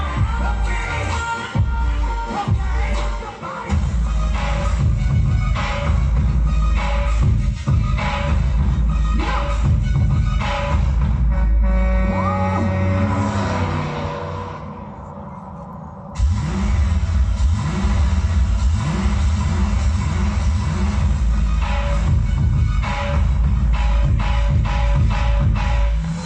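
No technical faults can be heard anywhere in the recording. Nothing in it points to a problem in how the audio was captured, processed or carried.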